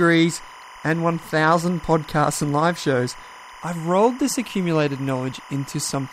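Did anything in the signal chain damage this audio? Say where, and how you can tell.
Yes, timecode bleed in the analogue wiring: 25-frame linear timecode leaks in, adding a chirping warble near 1 and 2 kHz, roughly 20 dB below the speech, throughout.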